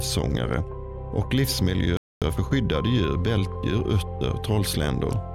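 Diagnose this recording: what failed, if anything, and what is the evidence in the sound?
At the playback stage, a playback stall cuts the sound off mid-flow at 1.97 s, leaving about 250 ms of silence before output returns at 2.22 s. The player likely ran out of buffered data or had its thread blocked, starving the output until it recovered.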